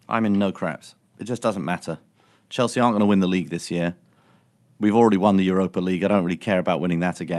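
Nothing stood out on listening to this speech, which came over a call path whose bandwidth tops out around 12 kHz.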